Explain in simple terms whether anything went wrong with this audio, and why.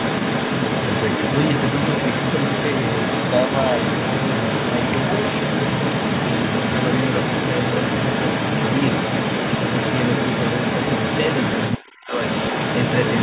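The echo canceller likely failed to remove the other side's voice, so the other side's voice leaks through for the whole clip, 0 to 13.2 s, about as loud as the talker.

With both sides talking at once, the canceller likely turned everything down: speech is suppressed in double talk, dipping sharply for about a fifth of a second between 11.9 and 12.15 s.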